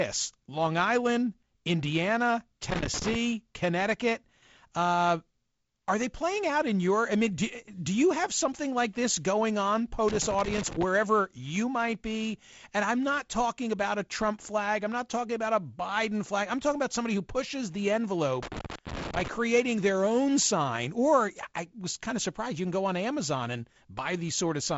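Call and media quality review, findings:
Loose connector crackle: intermittent contact, likely a worn or dirty connector, making and breaking and chopping the speech path into irregular scratchy bursts at 2.70–3.15 s, 10.08–10.83 s (after "like this going on", before "you might be") and 18.43–19.28 s (after "somebody who pushes the", before "their own sign"). The crackle sits over G.722 wideband audio that stops near 7.7 kHz.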